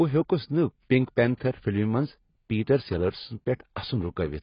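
It's a speech clip with heavy AAC compression damage throughout: nothing above 5.1 kHz, dull and smeared, likely from AAC-LC at a very low bitrate, around 16 kbps.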